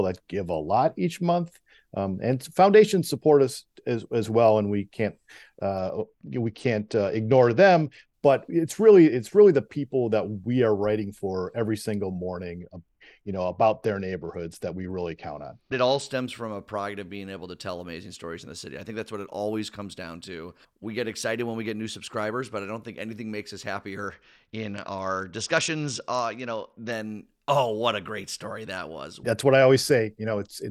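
Speech with three Bluetooth SBC bit pool drops, at 5.78–8.14 s, 12.59–16.06 s (after "writing for every single", before "from a pride of") and 24.08–26.92 s (after "think anything makes us", before "oh what a great"). Treble dulls and gritty noise rises but nothing drops out, unlike packet loss, which fits the bit pool falling from 28 to 9, about 78 kbps.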